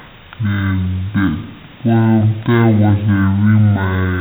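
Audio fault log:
Throughout: stereo read as mono. The speech plays at half speed (0.5x) and a full octave low, 12 semitones down, because alternating left and right samples are taken as consecutive samples of one channel, doubling the length. A faint mirrored copy sits in the upper spectrum.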